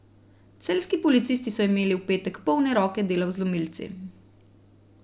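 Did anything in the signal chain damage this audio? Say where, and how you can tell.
No, nothing in the chain seems to have touched this speech, so there's no stage to point a finger at.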